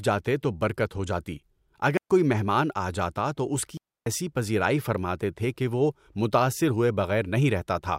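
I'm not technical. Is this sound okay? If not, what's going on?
No. The speech cuts out twice, at 1.97 s for about 0.13 seconds and at 3.77 s for about 0.29 seconds. These are digital wireless dropouts: the radio link between the microphone and its receiver briefly lost too much of its data, so the receiver muted the audio rather than play garbage. That is why each gap is a clean hole of near silence, with no crackle or hiss on either side.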